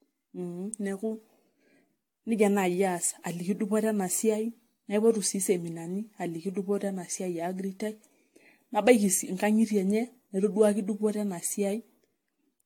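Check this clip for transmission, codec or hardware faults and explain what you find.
There is one fault, present throughout. Generation loss: the speech is swirly, hollow and smeared at onsets, worse than its 18.6 kHz bandwidth implies, likely from about seven AAC re-encodes rather than one low-bitrate pass.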